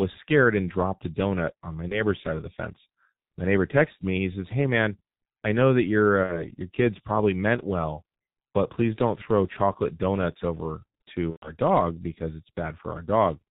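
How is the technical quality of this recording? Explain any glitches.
The quality is poor, with heavy low-bitrate codec damage throughout and three short dropouts.

G.723.1 codec, throughout: this narrowband telephony codec drops everything above 4 kHz and tracks the voice in coarse 30 ms frames, consistent with its 6.3 kbit/s mode. The speech sounds muffled and hoarse, with smeared consonants.

VoIP packet loss concealed by the speech codec, at 1.89–2.02 s, 6.23–6.48 s and 11.31–11.52 s: the decoder filled missing audio, roughly 30, 60 and 120 ms (consistent with one, two and four lost frames), by repeating its last pitch and filter at falling gain. Each gap becomes a buzzy, fading smear, and the speech stays weak briefly afterwards.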